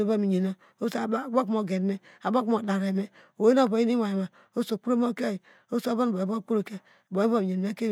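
No technical faults can be heard anywhere in the recording, with the signal path behaving as intended throughout.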